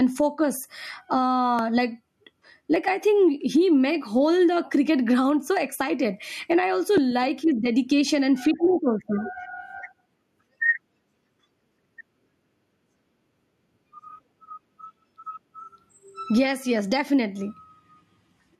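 Gain pumping runs through the whole clip, likely from input gain set far too high with a fast limiter clamping down on every loud syllable. The gain swings by roughly 15 dB, leaving the speech squashed.

A dropped buffer (overrun), likely where the program failed to collect samples before the hardware overwrote them, causes jumps at 1.59 s, 2.76 s and 6.98 s. Around 5 to 10 ms vanishes each time, with no gap, so each is heard as a small skip ahead.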